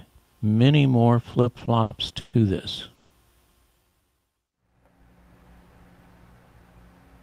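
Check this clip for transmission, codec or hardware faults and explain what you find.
Three network-delivery faults appear in sequence, all affecting timing rather than dropping any audio.

From 1.31 to 2.35 s there are repeated stalls (stutter). Packets kept arriving late, so the jitter buffer ran dry six separate times. Each time the receiver stretched the last sound until data resumed, filling about 280 ms in total, with the longest wait 130 ms. That concealment covers roughly a quarter of the span. The sound hitches and drags in a stop-start rhythm, yet nothing is lost.

At 2.95 to 3.12 s a call audio freeze occurs. The likely cause is packets held up in transit that emptied the buffer, with playback pushed back by 150 ms. The receiver bridged the gap by continuing the last sound as a fading buzz or hiss for 150 ms, never falling to silence, then resumed exactly where it had stopped. 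It is heard as a brief frozen tone inserted into the flow.

From 3.83 to 5.03 s a jitter buffer slow-down follows. With its reserve depleted, the receiver rebuilt it by repeating single pitch periods and fragments of pauses many times over, adding 137 ms. Playback runs at about 89% speed while keeping the original pitch, so the sound feels slightly drawn out and sluggish.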